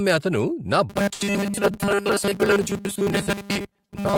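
From 0.90 s to the end, the speech takes on a robotic sound from repeated short buffers: a rigid 200 Hz buzz replacing most of the audio, likely from one 5 ms buffer replayed while fresh audio arrives too seldom. At 1.13 to 1.22 s, a short stall from a late packet holds the last sound for 75 ms until the packet arrives, with nothing lost. At 1.26 to 1.28 s, a short concealed packet loss leaves a brief smear: 50 ms is dropped, 10 ms is filled in, and the delay falls by around 40 ms. From 1.72 to 2.10 s, a jitter buffer slow-down stretches the sound by 39 ms to 91% speed at unchanged pitch, drawing it out slightly.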